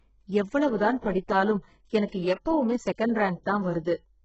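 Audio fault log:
Throughout: HE-AAC compression, heavy damage. The speech has nothing above about 7.9 kHz. The treble that remains sounds synthetic rather than captured. This is likely a low-rate HE-AAC encode, near 8 kbps. Only the lower band is truly coded. The upper band is patched in from copies of lower frequencies, shaped by a coarse envelope. Its harmonics fail to line up with those below. So s sounds come out gritty, metallic or lispy.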